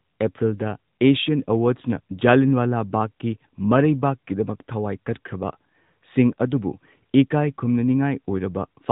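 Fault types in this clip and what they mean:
AMR narrowband mobile codec: The speech sounds thin and boxed-in, with nothing above 3.8 kHz, and carries a plainly audible buzzy, synthetic edge across the whole clip. This is the AMR-NB phone codec, which samples at 8 kHz and rebuilds the voice from a vocal-tract model excited by a few pulses per 5 ms subframe. The degree of roughness points to an upper bitrate mode, consistent with about 10.2 kbps.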